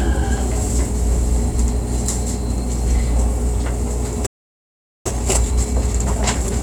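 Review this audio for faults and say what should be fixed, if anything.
Playback stall, 4.26 to 5.06 s: the sound cuts out mid-flow and the output stays silent for about 0.79 s before resuming. This is likely the player draining its buffer, or its audio thread being held up by other work, so nothing reached the output until data arrived again. A larger playback buffer and a high-priority, unblocked audio thread would prevent it.

Time-compressed catch-up, 5.06 s to the end at 6.62 s: after the gap, the sound runs hurried at about 1.25 times normal speed while keeping its pitch. The player is recovering the lost time by cutting out small slices of audio and cross-fading the remaining pieces together, which shortens the backlog without raising the pitch. Preventing the stall removes the need for catch-up, and a gentler speed-up spread over a longer stretch would make any recovery less audible.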